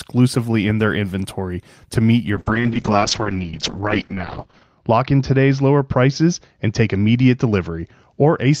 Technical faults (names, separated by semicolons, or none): call bitrate drop